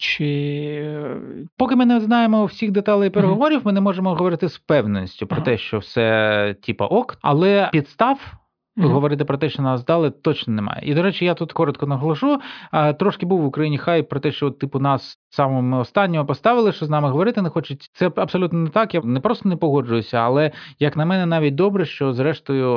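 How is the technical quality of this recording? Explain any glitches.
No technical faults are audible.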